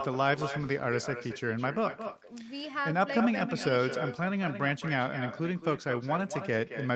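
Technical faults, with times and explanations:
Throughout, echo with no canceller: every phrase is trailed by a second, weaker copy of itself about a fifth of a second later, sitting about 9 dB below the direct speech and sounding thinner. The far end is playing the call through a loudspeaker, its microphone recaptures that playback, and nothing subtracts it, so the sound returns after the network round trip. The repeat keeps the same 8 kHz top cut as the main signal, consistent with a wideband Opus call path.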